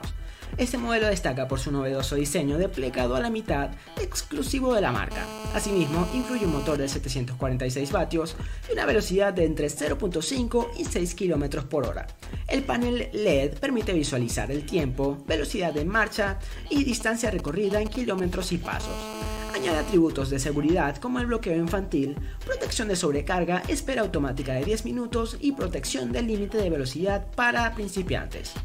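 A hard, raspy buzz at 217 Hz, rich in harmonics and about 10 dB below the sound, runs steadily from 5.11 to 6.77 s. This is GSM phone buzz: a nearby 2G phone on a call transmits in bursts 217 times a second, and the audio circuitry rectifies those radio pulses into the signal.

From 16.77 to 18.82 s short groups of 217 Hz buzzes appear at roughly the same level. These are GSM signalling bursts, brief groups of transmissions from the phone, picked up and rectified the same way. At 18.83 s they give way directly to continuous GSM phone buzz, which lasts until 19.95 s as the phone settles into steady call transmission.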